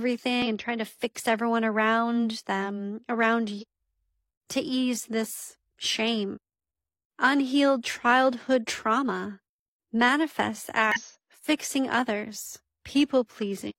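Damaged data in the compressed stream hits at 0.42, 3.58, 6.32, 10.92 and 13.66 s, each about 55 to 70 ms long, near "and tried to fix", "everyone around them around" and "unhealed childhood trauma manifests". Corrupted frames make the decoder misread them and lose sync, so each one sounds as a brief chirp, squawk, click or short hole.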